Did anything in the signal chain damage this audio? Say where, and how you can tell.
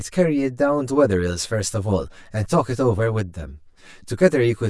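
Yes, there's channel delay (comb filtering) across the whole speech clip. The audio sounds hollow and phasey from start to finish, with fixed notches that don't move as the voice changes. One channel is running about 10 ms behind the other, which fits a short buffer offset in the driver or buffer stage. When the two are summed to mono, the shared content cancels at evenly spaced frequencies, starting around 50 Hz and then roughly every 100 Hz above that.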